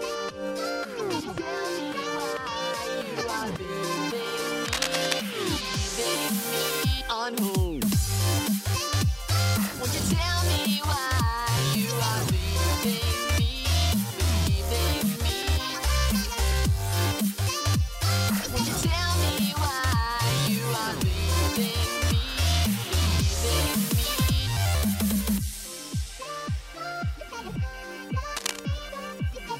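At 4.65 to 5.13 s, and again briefly at 28.36 to 28.59 s, there's cable scratch noise: dense, ragged bursts of scratching riding just a few decibels under the sound. That's likely a worn cable or connector being shifted, its contact resistance jumping around as it moves.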